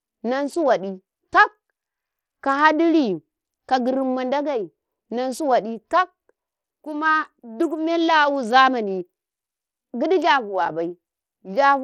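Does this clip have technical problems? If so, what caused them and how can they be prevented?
Yes. Throughout the speech the top end thins out and flickers, with a gritty, aliased edge on everything, which sounds like Bluetooth SBC compression. Its few sub-bands and starved bit pool, likely near an 80 kbps setting, leave the treble underfunded. Recording over a wired connection, or a higher-quality Bluetooth codec, would avoid it.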